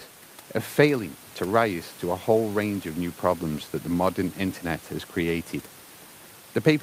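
No technical faults can be heard in the clip.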